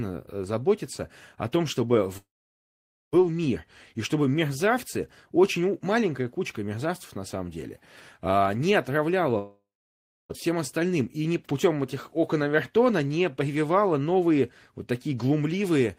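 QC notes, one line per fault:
2.17–3.14 s and 9.38–10.31 s, long network dropout: the stream likely stopped delivering audio for about 0.96 s and 0.92 s. The receiver stretches the last sound into a brief fading buzz, then leaves silence for about 0.85 s in the first gap and 0.64 s in the second. Speech resumes afterward with that stretch simply missing, so the audio jumps forward rather than catching up.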